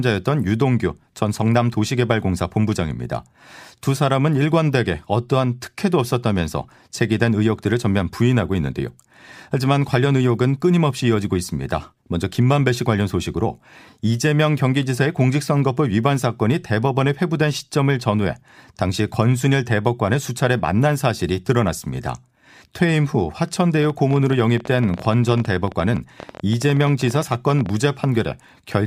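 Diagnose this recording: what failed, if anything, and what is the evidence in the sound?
A train of clicks runs over the speech from 23.83 s to 27.70 s, roughly fifty sharp ticks at about 14.7 per second with uneven spacing, peaking about 5 dB above the signal and audible in the pauses as well. The likely cause is electrical interference coupling into the analogue wiring or a faulty connection or power supply injecting repeated pulses. On a spectrogram they appear as thin broadband vertical lines; on the waveform, as narrow spikes poking above the speech envelope.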